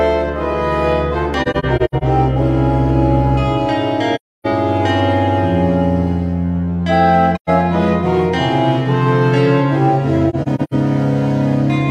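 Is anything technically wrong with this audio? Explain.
Yes. Soft-edged dropouts occur at 1.42–2.03 s, 4.15–4.47 s, 7.35–7.50 s and 10.29–10.74 s. The first and last are broken clusters with gaps of up to about a tenth of a second. This is AAC frame loss with muting: lost frames decode as silence, and overlapping windows fade the edges.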